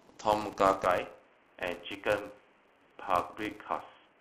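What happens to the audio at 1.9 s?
At 1.9 s the input has switched to a poorer device, a change that began at 0.84 s and lasts to the end. The likely cause is the recording moving to a narrower-band microphone or headset profile. The speech sounds dull and boxy, a little quieter, and with a faint new noise floor far beneath it. There is no gap at the switch. Running through this moment too is the filter restarted on every block: each block starts from silence, giving a 200 Hz buzz that rises and falls with the speech level.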